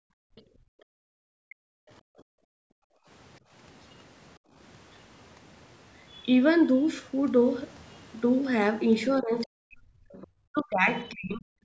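The clip is speech, and the room background gated by the echo canceller drops away from 0.0 to 3.52 s, falling by about 40 dB for roughly three seconds in total. It dips again from 4.39 to 4.54 s, by about 32 dB. The canceller clamped the microphone while its loudspeaker played. Faint scraps of another voice come through at 0.36–0.42, 1.49–1.55, 9.41–9.46 and 10.22–10.59 s. They sit far below the talker, roughly 25 to 35 dB down. This is likely the other side's voice leaking through from the loudspeaker, left behind by incomplete echo removal. From 9.18 s to the end, the talker's speech sinks and breaks up, very deeply, for about two seconds in all. That points to speech suppressed in double talk. The canceller could not split the talker from the echo and turned both down. The band stops at 8 kHz, from the call microphone processing.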